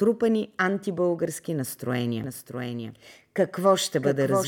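At 2.24 s, just after "антибългарски настроения", a doubled audio track begins and runs to the end. A second copy of the speech trails the first by about 0.7 s, some 5 dB quieter, dry and full-band. It cuts in abruptly. Likely cause: a slower duplicate capture path.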